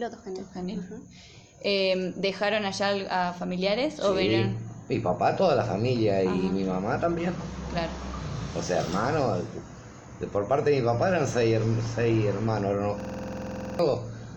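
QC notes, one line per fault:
13.00–13.79 s, system hang loop: one 46.44 ms slice of audio repeats exactly 17 times, heard as a rapid, rattling stutter at 21.5 Hz, because the system froze while the hardware kept replaying its ring buffer, which fits a 2048-sample buffer. Around 0.7 s of the real signal is lost. The waveform shows identical blocks tiled edge to edge, and the spectrogram shows a repeating pattern with vertical seams at each loop boundary.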